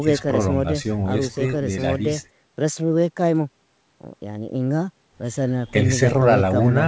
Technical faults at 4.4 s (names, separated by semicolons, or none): none